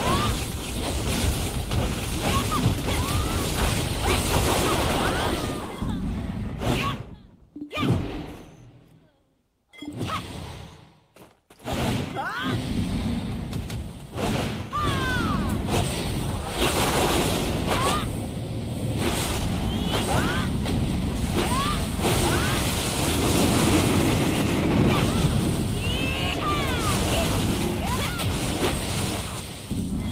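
Nothing is technically wrong with this audio.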